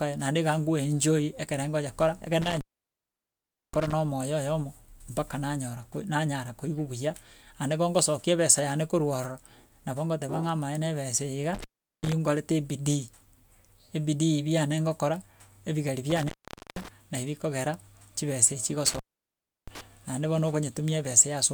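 Intermittent contact interrupts this speech recording at 2.42–3.93 s (just before "na omoyo"), 11.55–12.12 s, 16.10–16.88 s (right after "ebidii biane ngokora ebigeri") and 18.86–19.81 s. A loose cable or plug momentarily breaks the signal path, so the audio drops out with crackle at each edge and faint hiss during gaps of about 1.13 s, 0.39 s, 0.47 s and 0.68 s.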